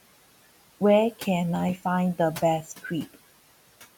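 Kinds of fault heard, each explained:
Noise suppressor artifacts: the suppressor pulls the room noise down by about 17 dB in the gaps, so the background dips between words and swells back under the speech.
Loose connector crackle: a bad contact making and breaking chops the signal, giving a burst of scratchy crackle from about 1.55 to 1.78 s.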